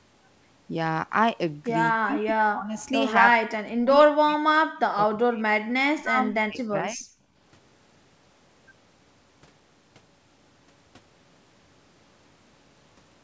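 A speech recording carried over a call path whose spectrum stops at 8 kHz, with three stretches of speech suppressed in double talk at 1.91–2.77 s, 3.2–5.47 s and 5.79–7.04 s. The voice dips, thins and breaks up in pieces, at worst falling by roughly 40 dB, most likely because an echo canceller turned the talker down along with the far side. On a waveform the envelope is bitten into ragged gaps, and a spectrogram shows the harmonics fading or vanishing in patches. From 2.78 to 2.86 s an echo leak adds a faint copy of the voice about 215 ms late and roughly 25 dB below the speech, likely residual loudspeaker echo the canceller missed. It shows as a weak, smeared repeat of the preceding harmonic pattern. At 7.32–7.36 s the background is gated by the echo canceller, dropping about 9 dB for 40 ms. This appears as a brief notch in the noise floor across all frequencies.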